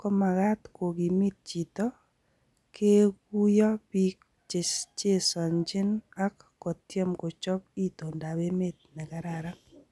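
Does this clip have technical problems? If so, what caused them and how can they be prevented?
No, the speech signal shows no technical faults, so nothing here needs a cause or a preventive step.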